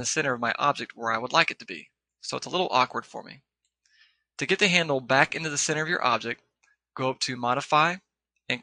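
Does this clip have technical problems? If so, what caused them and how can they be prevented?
No technical problems are audible.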